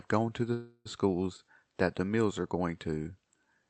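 Speech over a call path with Opus, band-limited to about 8 kHz. After "gone to the", a call audio freeze runs from 0.53 to 0.87 s: a fading buzz or hiss, then brief silence. The likely cause is a jitter-buffer underrun, so the rest arrives about 0.32 s late with nothing lost.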